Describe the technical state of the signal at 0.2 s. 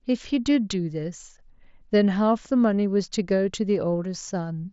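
At 0.2 s the signal is intact, carried through the mSBC Bluetooth headset path, which limits the audio to about 7.7 kHz at that moment.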